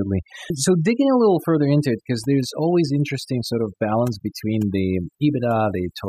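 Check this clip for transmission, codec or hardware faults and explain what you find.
The speech shows one processing fault, present throughout. Overdone noise removal: an aggressive denoiser mutes every frequency band that drops near its noise estimate, taking soft parts of the voice too. The background drops and breaks up into twinkling specks. Unlike low-bitrate codec warble, the artefacts track the noise floor.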